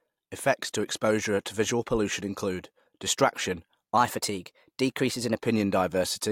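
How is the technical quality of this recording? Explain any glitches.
One glitch stands out. From 3.97 to 5.35 s, just after "visual pollution include distraction", the speech turns slightly hurried and high, running 1.09 times fast and about 1.5 semitones sharp. That is a wrong sample rate: the samples play faster than recorded, consistent with 44.1 kHz audio played at 48 kHz.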